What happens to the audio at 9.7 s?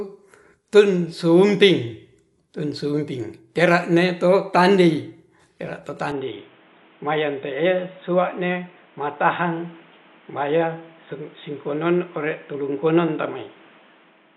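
At 9.7 s you're inside a stretch that starts at 6.12 s, right after "tera to", and runs to the end. It sounds like a likely input switched to a poorer device: the band suddenly stops around 3.8 kHz, so everything goes dull and boxy, with new background noise roughly 30 dB under the signal. There's no gap at the switch and no real level jump.

Underneath that, the whole clip carries plainly audible codec damage, likely from Dolby Digital compression at a low rate, which fits around 64 kbps. The encoder has trimmed everything above about 11.5 kHz and starved many frequency lines of bits, so the decoder fills them with noise, giving a dull sound with rough, fluttery grain around tonal parts.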